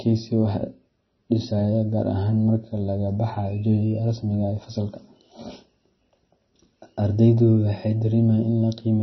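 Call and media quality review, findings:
Likely MP3 compression at a starved bitrate, consistent with roughly 24 kbps; encoder drops weak frequency lines frame to frame. Throughout: nothing above 5.9 kHz, dull speech, watery swirl, metallic chirps on s sounds, smeared consonant onsets.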